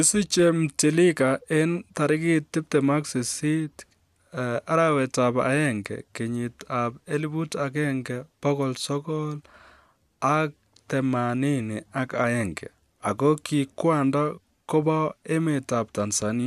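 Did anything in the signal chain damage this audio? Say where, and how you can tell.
No, no stage in the chain has left any audible damage on this speech recording.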